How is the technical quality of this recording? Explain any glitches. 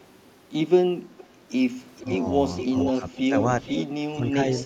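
The recording has two recurring call-path problems, echo leak and speech suppressed in double talk, which come and go through the speech.

Echo leak appears at 1.18–1.24 s, 1.96–2.14 s, 2.57–3.22 s, 3.65–3.84 s and 4.57–4.61 s. The likely cause is a loudspeaker on the far end whose echo canceller let part of its microphone pickup through and back down the line. You hear a copy of the speech trailing about 463 ms behind, roughly 10 to 25 dB below the direct voice. It is only a brief scrap in the first and last spots and a longer stretch around 2.6–3.2 s.

Speech suppressed in double talk occurs at 2.18–2.25 s, 2.92–3.34 s and 4.19–4.35 s. It likely comes from an echo canceller that, with both sides sounding at once, could not tell the talker from the returning echo and turned everything down. The voice dips briefly, by roughly 5 dB at first, deepest at around 15 dB in the middle stretch, and about 10 dB near the end. 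The result is short losses of level.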